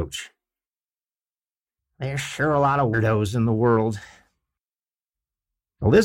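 Compressed frames skipped at 2.93 s, between "sure a lot of" and "in the world": about seven whole frames never reach playback, so the speech jumps ahead by roughly 150 ms.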